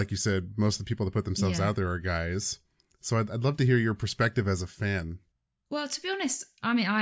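No technical faults can be heard anywhere in the recording.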